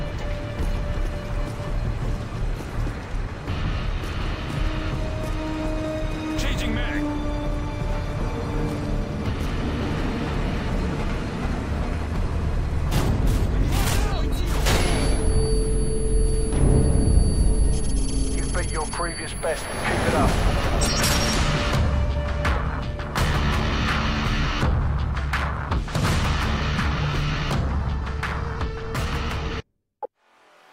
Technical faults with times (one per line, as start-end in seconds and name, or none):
0.00-30.72 sample clock jitter